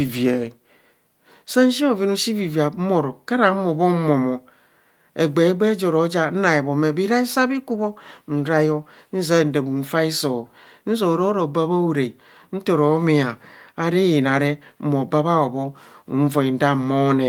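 No technical faults are audible anywhere in the recording.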